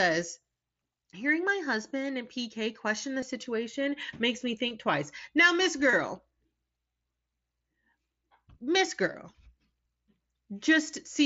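Short dropouts from concealed Bluetooth headset packet loss show up five times in the speech: at 3.21 s, between "question the" and "situation makes me"; at 4.69 s, right after "the situation makes me"; from 5.91 to 5.93 s; at 7.91 s; and at 9.12 s. Each gap is about 15 ms, which fits two 7.5 ms frames, except the 5.91 s one at 22.5 ms. The receiver patched each hole by repeating a matching slice of the preceding waveform, so you hear only a brief buzzy smear with a slight warble as real audio resumes, over the 8 kHz-limited mSBC sound.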